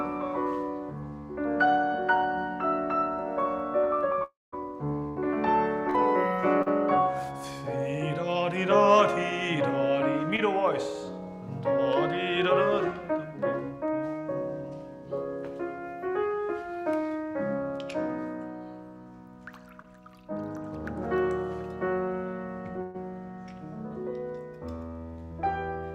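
From 4.23 to 4.54 s the sound holds as a fading buzz or hiss, then goes silent for about 0.19 s and resumes further on with roughly 0.3 s missing. This is likely a long network dropout, where the receiver stretches the last audio before giving up.

A burst of packet loss follows at 5.08 to 5.18 s, losing about 80 ms, and another at 22.82 to 22.96 s, losing about 120 ms. In both, the receiver extends and attenuates the last sound, giving a brief decaying buzz or hiss before playback jumps ahead.

Short concealed packet loss appears at 5.90 to 5.96 s, 6.62 to 6.68 s, 10.36 to 10.40 s and 19.82 to 19.86 s, each a gap of 20 to 40 ms. The decoder bridges each gap with extrapolated audio, heard as a momentary smear or wobble.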